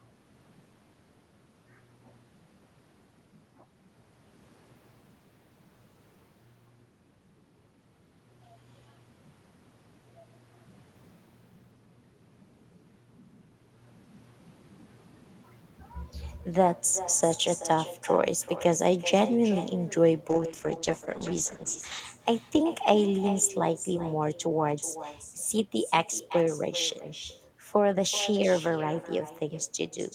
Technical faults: echo with no canceller; call bitrate drop

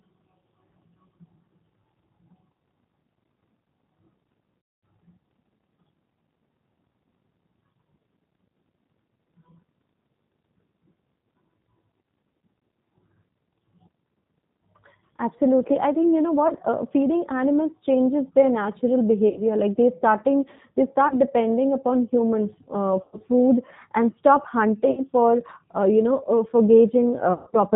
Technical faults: G.729 codec; VoIP packet loss concealed by the speech codec

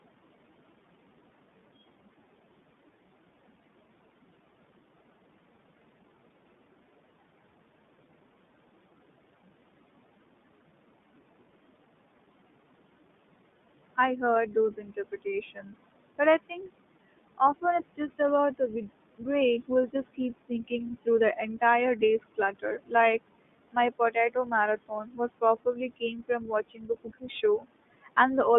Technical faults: noise suppressor artifacts; iLBC codec; speech cut by the noise suppressor

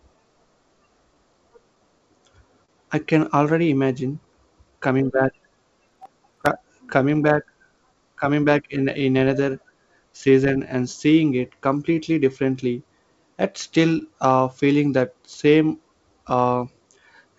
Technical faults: clock drift between sender and receiver; repeated timing corrections; short stall from a late packet; processor overload crackle; scattered short gaps

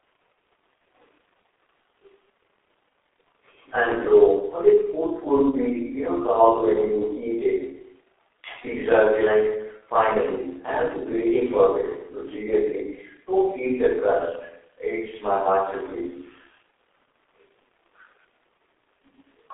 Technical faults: G.723.1 codec

